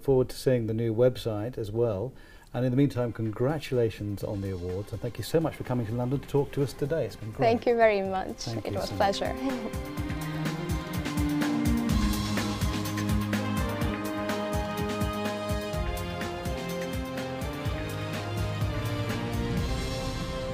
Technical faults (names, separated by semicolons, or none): none